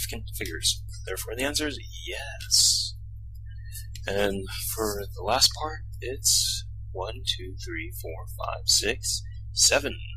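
Hard clipping at 0.68, 2.54 to 2.71, 5.32 to 5.46, 6.26 to 6.35, 7.30, 8.70 to 8.90 and 9.62 to 9.78 s: peaks exceed the stage's ceiling by up to about 9 dB and are sliced flat. The result is crackle, turning to harsh fuzz on the heaviest overloads at 5.32 and 9.62 s.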